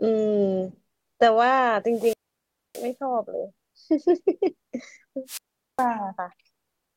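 Wireless microphone squelch dropouts occur at 1.89 to 2.94 s and 5.26 to 5.87 s. The FM radio link fades, hiss swells, and the receiver's squelch mutes the speech for about 0.62 s, then 0.41 s, before the signal recovers.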